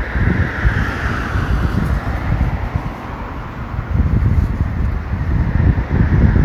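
At 2.30 s, compressed frames were skipped: the decoder never played a short run of frames, either because they were missing from the stream or because it rejected them as damaged. The gap of around 70 ms fits about three frames of 23.2 ms each. The sound abruptly jumps ahead by that much.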